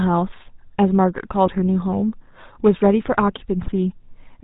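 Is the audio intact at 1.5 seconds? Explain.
No. GSM bit errors strike from 1.46 to 1.50 s: corrupted bits, nearly 2 percent of them, reach the decoder and scramble its filter, pitch and gain values, so the spectrum warps and the level jumps for what sounds like two damaged frames, giving a brief squawking pop. Underneath, the GSM full-rate codec runs throughout, consistent with its 13 kbps mode. Its pulse-driven vocal-tract model and lack of anything above 4 kHz give the speech a plainly audible buzzy, gravelly roughness.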